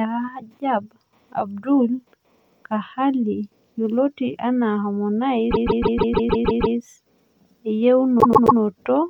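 Speech stutters at 5.50–6.75 s and 8.19–8.58 s, looping 157 ms and 131 ms blocks: repeated frames, where compressed data is decoded again.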